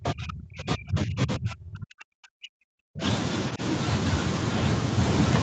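From the start to 3.02 s, speech is suppressed in double talk, likely because the echo canceller couldn't tell the talker from loudspeaker echo while both sides spoke, so it turned everything down. The speech sinks by as much as about 40 dB, fading and breaking up for roughly three seconds. Within that stretch, at 0.05 to 0.09 s, the other side's voice leaks through, likely residual echo the canceller missed. It is a brief scrap about 10 dB below the speech. Speech suppressed in double talk returns at 3.51 to 3.61 s, likely the same canceller reacting to overlapping talk, as a short dip of about 10 dB.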